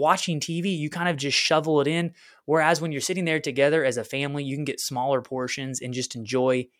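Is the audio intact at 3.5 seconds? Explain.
Yes, the speech at 3.5 seconds plays through intact, with no dropout, click, distortion or other fault at that moment.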